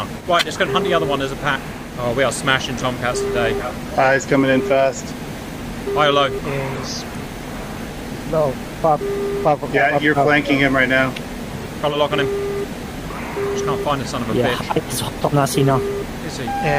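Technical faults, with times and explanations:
0.39–0.44, 2.77–2.86, 3.82–3.90, 6.75–6.79, 9.79–9.83, 11.59–11.67, 13.49–13.52 and 15.18–15.24 s: corrupt frame decoded. Each is a short chirpy blip or burst of noise lasting a handful of codec frames, so 20 to 80 ms. Damaged bits got played instead of concealed, so misread gains and codes dump energy in the wrong bands. The first one is loudest. The 9.8 s one is nearly as hot, and the rest sit well below that.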